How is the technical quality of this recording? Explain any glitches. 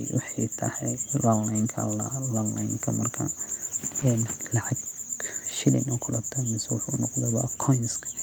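One glitch at 4.01 to 4.07 s: a lost packet rebuilt from error correction, likely two packets replaced by low-bitrate copies, leaving no gap but a briefly rougher, noisier stretch.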